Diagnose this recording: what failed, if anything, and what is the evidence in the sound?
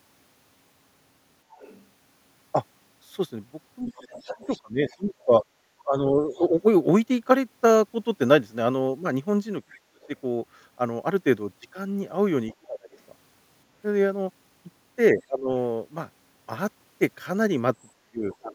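Other side's voice leaking through, in call processing: a faint second voice, roughly 25 to 30 dB under the talker, at 1.52–6.39 s and 10.01–15.23 s. This is likely loudspeaker echo the canceller missed, unlike steady crosstalk.

Speech suppressed in double talk: at 3.87–6.54 s and 9.71–18.54 s the talker dips in pieces, by up to about 30 dB. The dips fall while the far side was playing on the loudspeaker, unlike random network dropouts, and the likely cause is the echo canceller muting during overlap.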